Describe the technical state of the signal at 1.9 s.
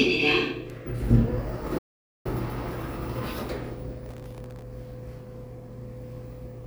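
The sound drops to silence from 1.78 to 2.26 s, a gap of about 0.47 s, likely a playback stall where the player starved of data.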